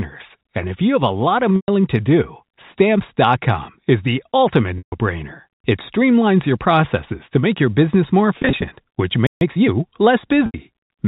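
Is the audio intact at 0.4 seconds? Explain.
Yes, the speech at 0.4 seconds is intact, carried cleanly through the G.711 telephone coding with no fault at that moment.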